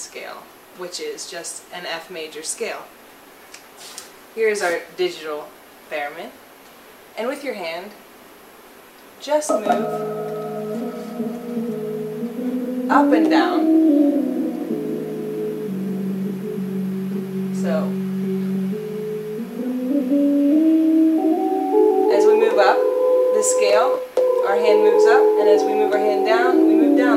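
Nothing stood out as a technical problem anywhere in the recording when listening through it.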